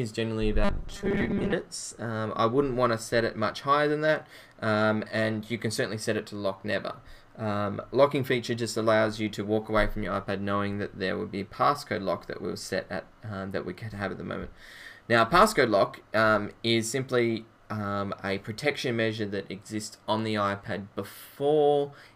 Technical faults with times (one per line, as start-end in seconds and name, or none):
0.64-1.53 robotic sound from repeated short buffers